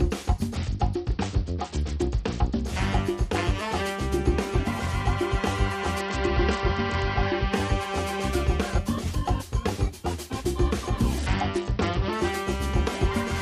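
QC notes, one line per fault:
0.56–2.66 s, 6.00–7.53 s, 11.18–12.13 s: Bluetooth SBC bit pool drop. In each stretch the treble dulls and a gritty, granular noise rides on the sound, then clears when full quality returns. The loss of the top band together with coarse grain fits the link shedding bit rate under congestion, consistent with the SBC bit pool falling from 31 to 9, about 72 kbps. The upper sub-bands get few or no bits and the remaining bands are quantised crudely.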